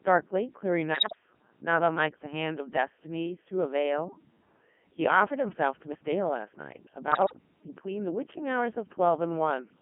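Throughout, the speech sounds robotic and buzzy, squeezed into a band from about 150 Hz to 3.4 kHz. This is the Codec 2 vocoder, heavily damaged: only pitch, voicing, energy and a spectral envelope survive, and sine-wave resynthesis rebuilds the voice. The thinness fits the 3.2 kbit/s mode.

From 0.94 to 1.15 s, and again from 7.12 to 7.33 s, the voice lurches in pitch and loudness and breaks into warbling bleeps. These are bit errors on digital voice radio, at a rate of several percent. Each corrupted bit throws off a whole frame's synthesis parameters.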